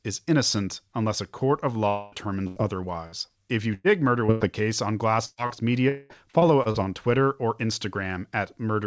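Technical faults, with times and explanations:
1.88–2.29 s, long network dropout: right after "unless a court of", the sound stops and the last bit of it is stretched into a fading buzz or hiss for about a quarter of a second, then picks up further on with that chunk gone. Likely a longer network stall on the call.
2.47–4.56 s, repeated packet loss (robotic sound): seven separate holes in about two seconds, the longest near 100 ms, each papered over by extending the previous sound. Nearly a fifth of that stretch is patched, so it comes across choppy with pieces missing.
5.25–5.40 s, burst of packet loss: roughly 120 ms never got played, so the receiver holds the last sound and turns it down, ending in about 20 ms of near-silence before the audio resumes with that piece missing.
5.46–5.53 s, short concealed packet loss: a hole of about 30 ms filled by continuing the previous sound, then blended back in, so you get a quick smear or wobble rather than a clear gap.
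5.89–6.13 s, long network dropout: about 210 ms doesn't arrive, and the last sound is carried on as a fading buzz or hiss before the audio returns further along. Likely another network stall, shorter than the first.
6.31–6.77 s, repeated packet loss (robotic sound): four quick gaps, none longer than about 30 ms, each patched from the sound before it. Close to a quarter of this half-second is filled in, giving a brief choppy flutter with pieces missing.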